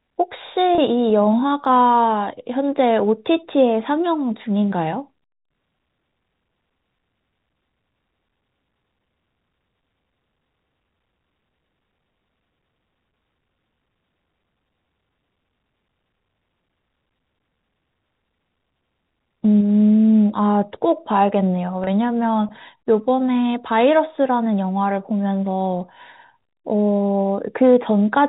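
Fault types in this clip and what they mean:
Packet loss with pitch repetition: at 0.75 s and 21.84 s, about 30 ms of audio, consistent with a single lost packet each time, is missing. The receiver fills each gap by repeating the last pitch period of the speech, heard as a brief held, buzzy tone within the telephone-band sound.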